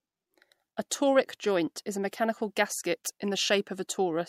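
A brief hiss rises ahead of the attack at 0.90 s, just before "joint is a", about 21 dB above the quiet it fills, and again at 2.11 s, just after "joint is a", about 14 dB up. Each smear lasts 16 ms, and the onset behind it sounds softened. This is pre-echo: the codec spread quantisation noise across a 26 ms block, and because it apparently never switched to short blocks, noise meant for the loud attack leaked into the silence before it.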